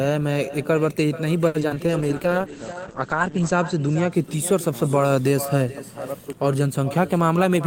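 Speech, with a quieter, thinner copy of every phrase trailing roughly 0.4 s behind it. That is echo with no canceller. The far end's loudspeaker feeds its microphone and nothing removes it. The echo sits about 14 dB below the speech. From 1.47 to 1.93 s there is repeated packet loss with a robotic sound. Four gaps open in under half a second, the longest 70 ms. Each is patched by stretching the last sound, so about 42% of that span is concealed, and it turns choppy. A call bitrate drop runs from 1.85 to 4.18 s. The sound goes rough and muffled as the top end falls from 20 kHz to 8 kHz. That points to the encoder falling from about 32 to 11 kbps after the bandwidth estimate dropped. From 6.90 to 7.65 s a jitter buffer speed-up plays the audio at 108% speed. Pitch stays the same. Small pitch-period slices, about 70 ms in all, are cut to shed excess delay, so the end sounds hurried.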